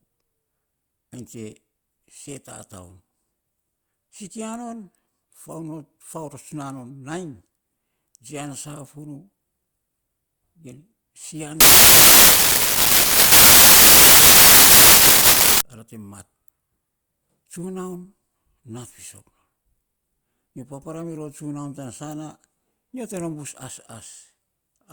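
Samples built from the wrong bytes, from 11.6 to 15.6 s: for these four seconds of speech the bytes making up each sample are assembled incorrectly, through a byte offset, a reversed byte order or a mismatched alignment. The low-order bits, which change rapidly from sample to sample, end up carrying the weight of the whole value, so the speech is replaced by loud, harsh noise, close to white on the louder sounds.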